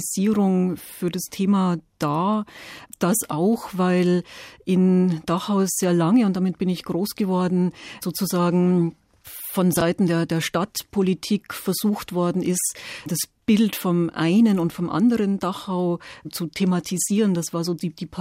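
Speech with two spots of chunks out of order: 0.78–0.80 s, and 9.77–9.81 s, after "groß geworden sozusagen von" and before "der der". In each, a short block of roughly 10.7 ms plays late, after the blocks that should follow it. That garbles the moment briefly, with hard joins where the blocks meet.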